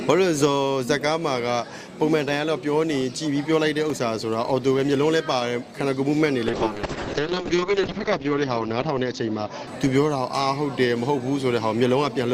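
From 6.49 to 10.73 s there is a call bitrate drop. The connection's bandwidth estimate fell and the encoder was forced onto a far smaller bit budget, consistent with a fall from around 48 kbps to about 6 kbps. It holds that floor for roughly 1.4 s. The coarser coding makes the sound rough and watery, and the top end is cut from 20 kHz to 8 kHz, leaving it muffled until the rate recovers.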